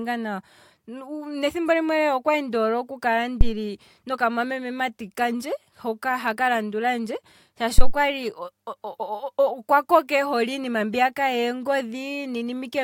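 At 3.41 to 3.54 s and again at 7.78 to 7.95 s the speech is hit by a phantom power thump: a supply switching on or off on the live input sends a voltage step through the coupling capacitors. Each is a deep thud peaking near full scale, about -2 and -1 dBFS, dying away within about 30 to 37 ms. On the waveform it shows as a large one-sided swing, and on the spectrogram as a brief low-frequency blotch.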